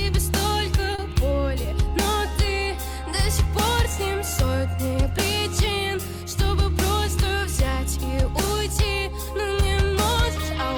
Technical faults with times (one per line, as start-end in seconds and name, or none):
0.95-1.00 short stall from a late packet